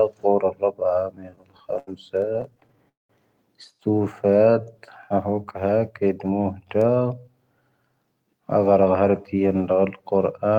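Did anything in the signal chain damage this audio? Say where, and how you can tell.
Yes. Repeated stalls (stutter) from 1.15 to 2.87 s at the network jitter buffer: 23 short gaps, the longest 79 ms, fill about 306 ms. The waveform shows repeated, smeared copies of the preceding sound.

A call audio freeze at 2.89 to 3.11 s inserts 203 ms, ending in 180 ms of silence. It is likely a buffer underrun from delayed packets. The spectrogram shows a fading smear into a blank band.

A jitter buffer slow-down from 3.90 to 4.28 s plays at 92% speed, adding 39 ms. Pitch stays fixed, so on the spectrogram the harmonics keep their spacing while stretching in time.

A jitter buffer speed-up runs at 110% from 6.25 to 7.37 s, trimming about 100 ms, and at 108% from 9.01 to 9.41 s, trimming about 40 ms. The waveform shows slightly compressed syllables at unchanged pitch.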